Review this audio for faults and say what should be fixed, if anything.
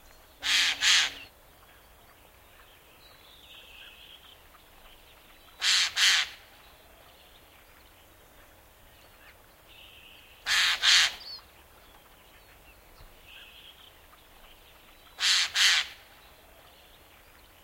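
Nothing needs to be fixed, as no faults are audible in this audio.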